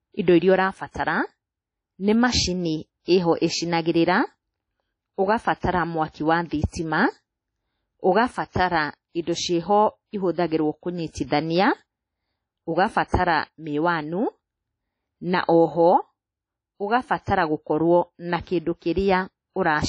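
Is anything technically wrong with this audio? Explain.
Yes. The speech carries plainly audible transform-codec damage throughout, and one attack is smeared by pre-echo.

WMA compression, throughout: nothing is present above about 10.1 kHz, and the remaining band sounds ringing and washy, with a hiss that swells and fades with the voice. This is likely WMA encoding at a low bitrate, consistent with roughly 32 kbps. Coarse quantisation spreads noise across each long transform block and discards weak spectral lines, leaving this dull, watery texture.

Pre-echo, 11.26 to 11.31 s: a short burst of hiss, about 46 ms long, arrives just ahead of a sharp onset, and the attack itself sounds soft rather than crisp. The onset falls late in a transform block, so the noise scaled for the loud transient is distributed evenly over the whole block, including the quiet stretch before it.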